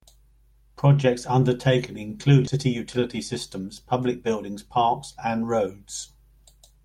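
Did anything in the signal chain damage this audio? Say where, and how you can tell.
Yes. At the network stage, the jitter buffer dropped about a second of queued audio. At 2.47–2.49 s the speech skips ahead with no gap, joining across the missing stretch.

In the jitter buffer, a speed-up then drained the excess delay by cutting pitch periods: 2.56–3.09 s runs 6% fast and 3.59–4.88 s runs 7% fast, sounding hurried at unchanged pitch.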